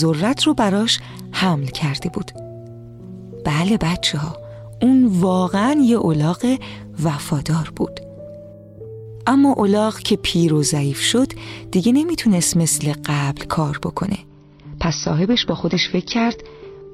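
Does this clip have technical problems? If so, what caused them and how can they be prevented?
Yes. An adaptive stream at a lower bitrate runs from 14.27 s to the end at 16.93 s. The connection slowed, so the player switched abruptly, with no gap, to a leaner encoding. Nothing above 6.1 kHz survives, and the sound turns dull and smeared, which fits a drop from around 96 to 24 kbit/s AAC. A larger playback buffer, or a floor on the lowest bitrate the player may select, would prevent this.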